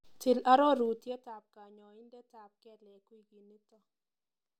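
Between 0.8 and 1.43 s, the speech level falls by about 25 dB in unsmoothed 2 dB jumps, roughly thirty a second. This zipper noise adds a rapid ticking rasp before "kanyaindetap kelek". The waveform envelope forms a staircase, and the spectrogram shows faint vertical broadband lines.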